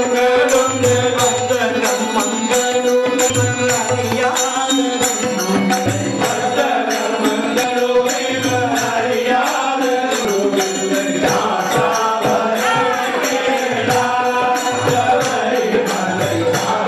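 At 3.29, 5.85, 7.63 and 10.24 s, compressed frames are skipped. Chunks of roughly 150 to 200 ms vanish, which fits several 26.1 ms frames being lost or rejected. The sound jumps ahead. Overlapping frames smear each join into a short blip, not a click.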